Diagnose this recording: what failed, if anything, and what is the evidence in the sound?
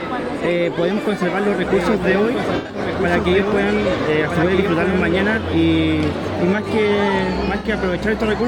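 A second copy of the audio runs underneath from 1.27 to 5.37 s, about 5 dB quieter and roughly one and a half seconds behind, with no room colour and abrupt start and stop. This doubled audio track likely comes from routing or editing that captured the material twice.

At 2.56 to 2.79 s the sound smears into a noisy, phasey patch. About 128 ms is missing, scattered over 170 ms, with the longest gap around 100 ms. A shorter 64 ms patch at 7.58 to 7.68 s is AAC frame loss with concealment: the decoder rebuilt missing codec frames from the last good spectrum.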